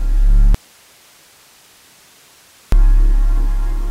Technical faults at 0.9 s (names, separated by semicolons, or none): audio dropout to a faint residue